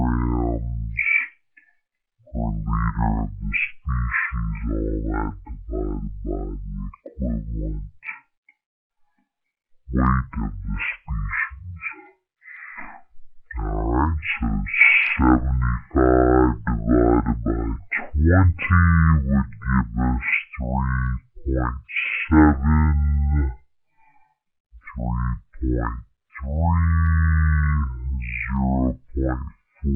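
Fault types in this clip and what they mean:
stereo read as mono: interleaved left and right samples play back as one channel, so the whole clip runs at half speed, an octave low, with a faint mirrored image high up.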